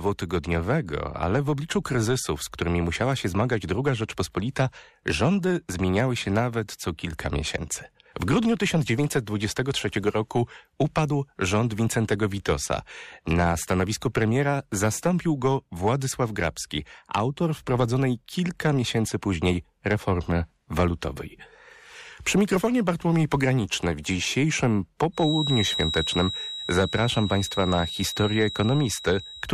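From 25.11 s, after "w dzisiejszym", a thin feedback whistle near 3.8 kHz sits well below the speech. A loudspeaker-to-microphone loop hovering at the edge of feedback is the likely cause.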